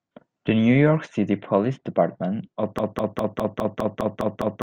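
From 2.79 s to the end, the speech sticks on a 204 ms fragment that repeats exactly, back to back, nine times. This broken-record loop likely comes from a stalled player or stream resending its last buffered piece, so the intended audio is lost.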